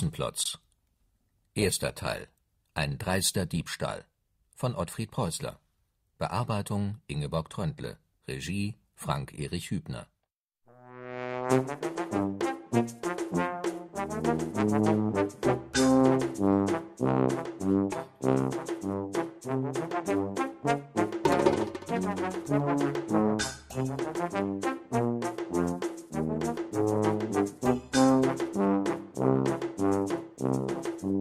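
From 0.44 s to 5.01 s the sound turns rougher and watery, losing some of its crisp top end, with the coarsest stretch lasting about 1.76 s before clarity returns. This is a call bitrate drop: the connection's bandwidth estimate fell, so the encoder was told to spend far fewer bits and quantised the signal more crudely. The degradation fits a cut from roughly 64 kbps down to about 26 kbps.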